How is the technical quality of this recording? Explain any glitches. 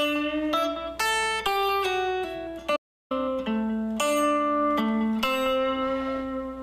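One glitch stands out. An audio dropout to silence runs from 2.77 to 3.11 s, erasing about 342 ms. The sound cuts abruptly to silence, with no room tone. The input was likely lost briefly while recording continued writing silence.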